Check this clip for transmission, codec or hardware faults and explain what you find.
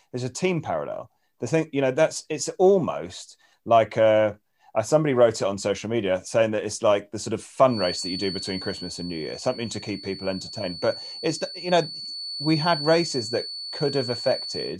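A feedback whistle, a thin, steady tone at 4.5 kHz, enters at 7.65 s, just after "like the sort of", and runs to the end, swelling and fading slowly about 10 dB beneath the speech. It is likely a loudspeaker-to-microphone loop held at the edge of feedback, sustaining one frequency without building up.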